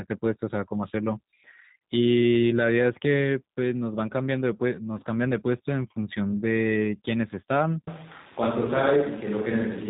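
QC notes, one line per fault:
Throughout: G.729 codec. The speech sounds slightly rough and synthetic, with a buzzy, reconstructed edge, and the top end is missing entirely, with nothing above 3.8 kHz. The damage is plainly audible. The codec rebuilds the voice from a vocal tract filter, a pitch predictor and a few pulses per 10 ms frame, so fine detail is approximated rather than carried. The band limit and coarseness fit G.729A at about 8 kbit/s.
7.87 s to end: switch to a distant microphone. The voice turns suddenly roomy and hollow, losing its bass weight, while room noise comes up to roughly 25 dB below the speech. The level barely changes, so the jump is heard in tone and space rather than loudness. The likely cause is that the close microphone dropped out and the recording fell back to one further from the speaker, picking up more of the room.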